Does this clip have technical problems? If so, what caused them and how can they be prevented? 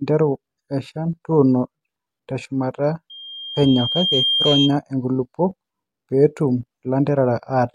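Yes. A loudspeaker feedback squeal occurs from 3.10 to 4.77 s. The microphone picked up its own loudspeaker, and at 3.2 kHz the loop gain exceeded one, so that tone swelled over about a second to roughly the speech level. Lowering gain, repositioning the microphone, or notching 3.2 kHz prevents it.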